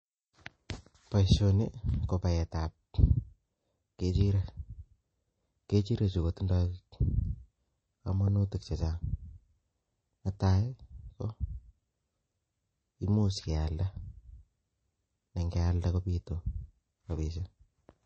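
Speech with MP3 compression damage throughout. Nothing is heard above 8.3 kHz. The band is cut flat there. Weak detail flickers in and out, giving a watery, swirly edge to s sounds. The damage is plainly audible. It fits a low bitrate near 32 kbps, likely from MP3 encoding.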